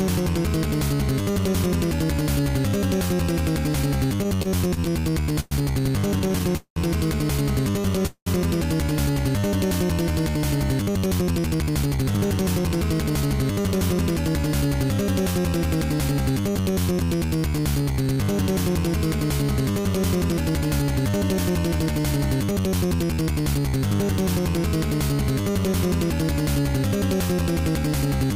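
Packets arrived late or too slowly between 4.23 and 5.54 s, so the jitter buffer ran dry 13 times. The receiver stretched the last sound across each wait, adding 279 ms in all with the longest gap 112 ms, and the audio drags and stutters. A second repeated stall (stutter) from 6.19 to 6.79 s has six gaps totalling 250 ms, the longest 196 ms. That is 42% of that stretch, against 21% in the first.

At 8.06 to 8.29 s the sound halts: about 201 ms is inserted, the last sound held and then about 70 ms of silence before the audio resumes where it stopped. This is likely a call audio freeze, with delayed packets emptying the buffer.

From 10.36 to 14.15 s a jitter buffer speed-up trims pitch-period slices to shed excess delay, roughly 0.4 s in all. The audio runs at 110% speed with unchanged pitch and sounds hurried.

Stuttering returns at 16.52 to 17.76 s, 14 brief gaps of at most 14 ms, 168 ms filled. 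Overlapping it, from 16.92 to 18.34 s, a jitter buffer slow-down repeats pitch periods to rebuild reserve, adding 118 ms. Playback runs at 92% speed at the same pitch, so sounds are drawn out.

A second speed-up at 20.24 to 22.67 s runs at 109%, removing around 0.2 s.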